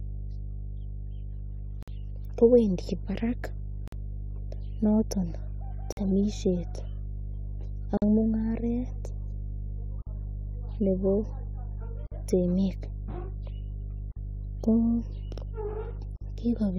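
A speech recording carries mains hum throughout: a steady 50 Hz tone sitting only around 10 dB below the speech, loud enough to underpin every pause. It points to a ground loop or a nearby transformer feeding the power line into the signal. On a spectrogram it shows as an unbroken horizontal line at 50 Hz, with fainter low harmonics stacked above it. In the waveform a regular low-frequency ripple rides under everything and never drops to a flat baseline.

The speech is also broken by a gap at a join of encoded pieces roughly every 2 s, at 1.83, 3.88, 5.92, 7.97, 10.02, 12.07, 14.12 and 16.16 s. Each gap lasts about 48 to 50 ms, and the sound resumes exactly where it left off. The regular spacing suggests the audio was encoded in separate 2-second pieces and joined without trimming. The encoder's start-up delay and the padding of each piece's last frame were both left in. A waveform shows a short flat-line dropout with abrupt, slightly smeared edges. 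The spectrogram shows a thin vertical blank stripe cutting through the speech.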